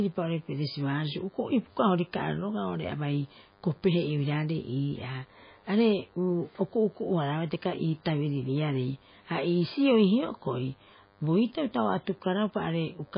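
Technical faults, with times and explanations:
Throughout: DECT cordless phone buzz. A steady, thin buzz sits under the speech at 100 Hz, with a stack of harmonics above it, well below the speech level, roughly 35 dB down. A DECT handset or base station close to the recording chain transmits a short radio burst every 10 ms, and some stage of the audio circuit rectifies those bursts. That turns them into a 100 Hz pulse train whose sharp edges produce the harmonic series.
Throughout: MP3 compression. The speech is heavily damaged, and nothing is left above 5 kHz, so sibilants and breath lose their edge and the sound turns dull. What remains sounds watery and swirly, with consonant onsets smeared. This is likely a low-bitrate MP3 encode, around 17 kbps. With so few bits, the encoder discards the upper band outright and zeroes weaker spectral lines, which switch in and out from frame to frame.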